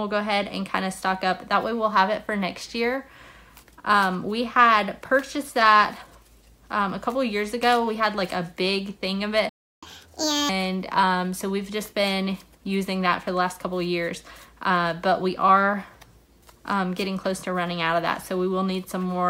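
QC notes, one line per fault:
9.49–9.83 s, playback stall: sound cuts to silence for 333 ms mid-flow, likely an emptied buffer or blocked thread, then resumes.
9.83–10.49 s, catch-up at higher speed: backlog played 1.5 times fast, pitch raised about seven semitones, then snaps back to normal, unlike steady speed drift.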